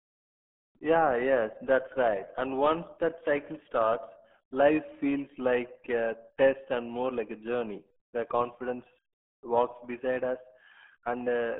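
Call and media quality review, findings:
RealAudio 14.4 codec, throughout the clip: speech muffled and gargly, no content above about 3.6 kHz, band roughly 200 Hz to 3.4 kHz. Probable component: legacy RealAudio 1 encoder in the media path. The heavy coding damage points to a very low rate, around 8 kbit/s, meant for dial-up. At that rate the codec keeps only a coarse model of the narrowband speech, hence the gargle.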